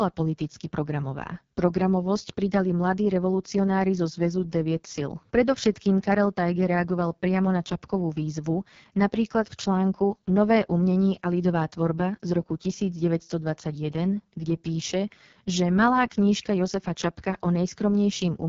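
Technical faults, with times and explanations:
Throughout, AMR wideband (HD Voice) codec: speech is squeezed through a pulse-driven vocal tract model at what sounds like its lowest 6.6 kbit/s mode, so heavy coding damage leaves the voice rough and raspy, with noise-filled highs and nothing above 7.2 kHz.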